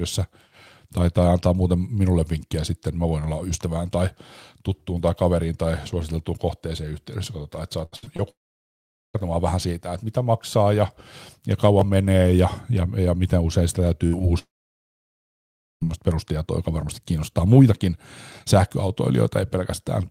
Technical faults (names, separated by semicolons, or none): repeated packet loss (robotic sound); long network dropout; chunks out of order; burst of packet loss; short concealed packet loss